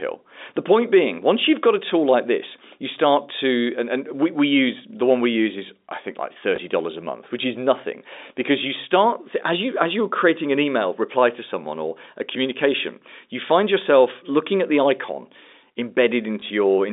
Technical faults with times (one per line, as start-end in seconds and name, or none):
6.56-6.58 packet loss with last packet repeated
16.40-16.42 packet loss with last packet repeated